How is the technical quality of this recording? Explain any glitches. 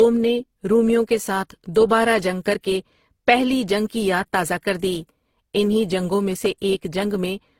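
The recording is degraded by layered compression artefacts throughout. Across the whole clip, the speech carries the artefacts of different codecs heard together, with nothing above 16.3 kHz. This points to transcoding between lossy codecs, likely a low-rate Opus encode re-encoded as HE-AAC, where the second codec spends bits reproducing the first one's artefacts and adds its own.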